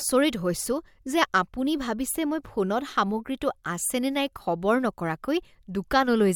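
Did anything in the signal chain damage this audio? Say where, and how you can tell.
No, nothing in the signal chain damaged this audio.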